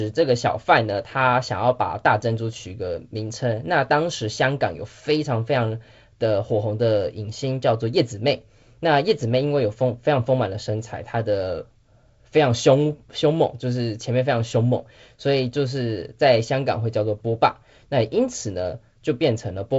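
No technical faults are audible.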